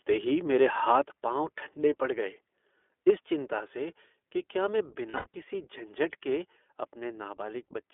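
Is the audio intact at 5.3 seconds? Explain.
No. The audio is not intact at 5.3 seconds. Between 5.10 and 5.35 s there is a burst of lost iLBC frames. About 160 ms of audio is missing, scattered over 240 ms, which fits eight lost 20 ms frames. The longest single gap runs about a tenth of a second. The decoder fills each hole by repeating the last pitch cycle blended with noise. Those spots sound like a held, slightly buzzy vowel. The voice comes right again almost immediately afterwards.

The whole clip also carries the iLBC codec itself. It is limited to roughly 300 Hz to 3.4 kHz, with a plainly rough, synthetic edge. Its independently coded 20 ms frames are consistent with the 15.2 kbps mode.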